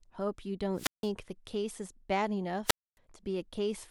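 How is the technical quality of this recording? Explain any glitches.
The recording is interrupted twice by wireless microphone squelch dropout, at 0.74 to 1.11 s and at 2.65 to 2.98 s. Each time, the analogue FM radio link weakened until the receiver's squelch muted the output, so the speech is replaced by a brief swell of hiss, then near silence lasting about 165 ms and 265 ms respectively, before the voice returns.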